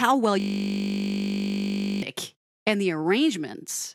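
A speech clip whose only fault is a system hang loop running from 0.4 s to 2.02 s. For that stretch the speech stops and a single 20 ms slice of audio repeats exactly, cycling at 50 Hz, so it comes across as a steady buzz at that rate, not a stutter. This is what happens when the computer or audio driver freezes while the sound hardware keeps replaying the same short section of its output buffer.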